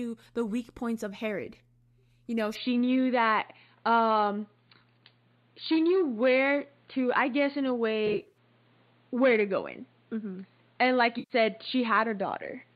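At 2.55 s the input was likely switched to a poorer device with no gap at the changeover. From there to the end the speech loses everything above 4.6 kHz, turning dull and boxy, with a modest level jump and a faint new noise floor well beneath the voice.

AAC frame loss with concealment occurs twice. Between 8.07 and 8.38 s, about 150 ms of frames drop out in short runs scattered across 280 ms. The decoder patches each gap from the last good spectrum, leaving a smeared, phasey stretch. At 11.19 to 11.33 s, another 110 ms is lost and concealed the same way, giving a brief noisy smear.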